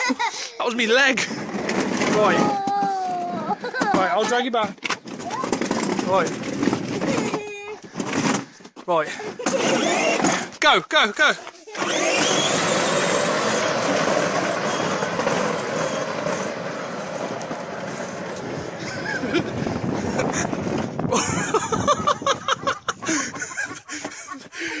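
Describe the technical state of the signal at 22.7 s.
At 22.7 s the signal is intact, with no technical fault present at that moment.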